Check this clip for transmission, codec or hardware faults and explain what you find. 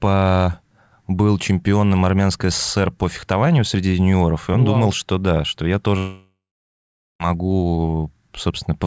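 There is one fault, a long network dropout, from 5.98 s to 7.22 s. The speech stops being delivered for about 1.2 s, and roughly 1.2 s of audio is simply gone. The receiver keeps extending the last sound it had, which turns into a fading buzz or hiss, and the final 0.79 s of the gap is near-silence. Speech then resumes later, with the missing stretch skipped. The likely cause is packets lost in transit for over a second. The call codec's band limit is audible throughout, with nothing above 8 kHz, which fits G.722 at 64 kbps.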